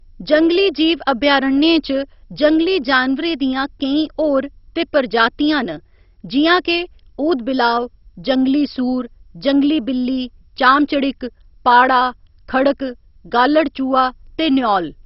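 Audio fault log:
throughout: MP2 compression, likely, given the heavy coding damage across the speech. Nothing is left above 5.6 kHz, so the speech sounds dull, and the bands that remain carry a gurgling, granular roughness as they flicker in and out. The degree of damage points to a very low bitrate, in the region of 32 kbps. Unlike a plain low-pass filter, the top is not just removed. The remaining bands are coarsely quantised, and that is what causes the warbling grit.
10.66–10.70 s: hard clipping. For about 44 ms the speech peaks are driven roughly 3 dB past what the stage can pass, so their tops are cut flat. That flattening adds harmonics high in the spectrum, heard as a brief crackle on the loud moment. Unlike the steady codec grit, it is tied to that short span and sounds like a sharp crackle, not a change in tone.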